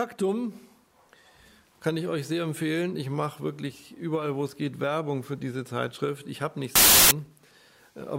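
From 6.76 s to 7.11 s the audio collapses into loud, broadband hiss: samples built from the wrong bytes. For about a third of a second the reader assembles each sample from misaligned or swapped bytes, so the rapidly fluctuating low-order bits land in the most significant positions and dominate every value. The result sounds like harsh noise rather than the underlying sound.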